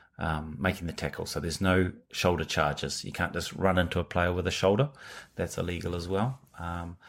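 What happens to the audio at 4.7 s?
Nothing goes wrong at 4.7 s; the speech carries on there without any dropout, click, distortion or other audible fault.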